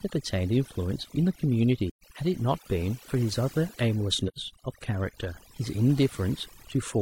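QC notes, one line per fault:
throughout: overdone noise removal. Background gaps fall to near silence, speckled with faint twinkling tones. A noise reducer set far too hard is cutting individual frequency bands whenever they sit close to its noise estimate, and quieter parts of the speech are removed with the hiss. Unlike low-pass filtering or heavy codec compression, the damage flickers band by band over time, which causes the warbling specks.
1.89–2.04 s and 4.28–4.39 s: AAC frame loss with muting. The sound fades out and back in around two soft-edged holes, about 130 ms and 85 ms long, which fits three and two lost frames. The decoder zeroed the missing spectrum, and the overlapping transform windows turn each edge into a short fade instead of a hard cut. That smooth edge sets this apart from a sample dropout or a buffer underrun, which cut off abruptly.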